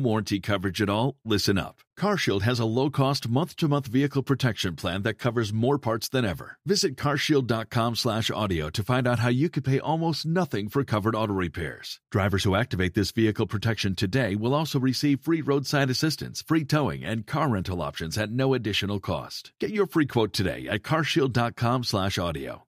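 No technical faults can be heard anywhere in the recording; the signal stays continuous and steady throughout.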